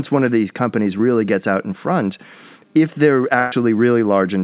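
A speech clip with two dropouts. At 0.98 to 1.01 s there is a short concealed packet loss. About 20 ms of audio never arrived in time. The receiver stretched the previous sound across the hole and blended back, leaving a brief smear. From 3.39 to 3.54 s a burst of packet loss is heard. About 120 ms of speech is gone. The decoder kept extending the last sound and faded it, producing a held, dying tail of roughly an eighth of a second before speech resumes further on. Nothing is heard above 4 kHz, consistent with a G.711 mu-law call path at 64 kbps.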